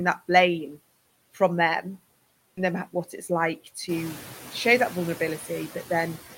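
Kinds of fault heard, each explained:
noise suppressor artifacts: steady background is pulled down by about 16 dB frame by frame; spectrograms show the noise floor dipping between phrases and rising under speech.
skip ahead: at 2.57 s playback jumps forward with no gap, roughly a second of speech missing; the waveform shows two segments butted together without silence.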